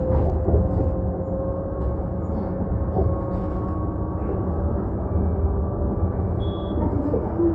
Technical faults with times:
none

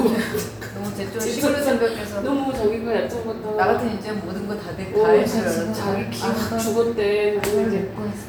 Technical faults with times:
none

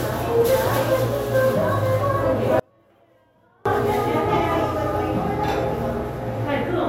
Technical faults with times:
2.59-3.65 audio dropout to a faint residue

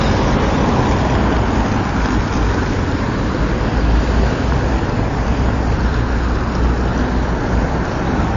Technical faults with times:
0.00-8.36 MP3 compression

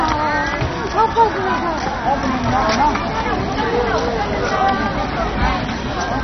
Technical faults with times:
0.00-6.23 MP2 compression

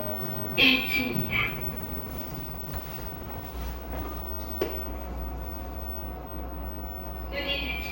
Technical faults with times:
none

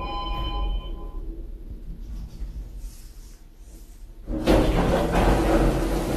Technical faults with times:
0.00-6.16 AAC compression

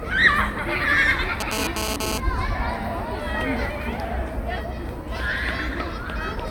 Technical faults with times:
1.40-2.18 GSM phone buzz

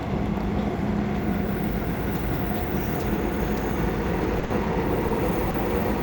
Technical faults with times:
4.39-4.51 short stall from a late packet
5.08-5.11 short stall from a late packet
5.50-5.55 short stall from a late packet

